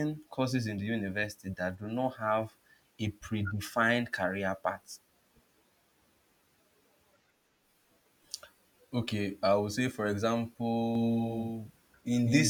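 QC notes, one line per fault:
10.95–12.50 s doubled audio track: an abrupt, dry echo about 5 dB down trails about 0.2 s behind until the end, likely from a slower second capture path.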